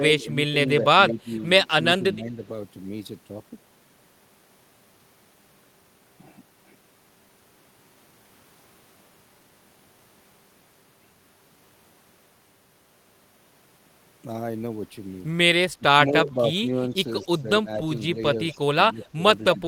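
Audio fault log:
0.00–1.31 s, 1.78–2.42 s, 15.76–16.88 s, 17.22–18.17 s and 18.55–19.19 s, speech suppressed in double talk: the echo canceller likely could not separate its own side's talk from the far side's sound playing over its loudspeaker, and pulled the whole signal down. The speech dips or breaks into pieces for a few hundred milliseconds to about half a second in each span, falling by about 10 dB early on and about 15 dB in the last three spans.
17.22–17.26 s, 18.47–18.55 s and 19.03–19.08 s, echo leak: a far end playing the call over a loudspeaker likely failed to cancel all of what its microphone picked up, so a little of this speech came back. Each time it arrives as a brief, faint scrap of the same speech trailing about 227 ms behind, at about 25 dB below the speech.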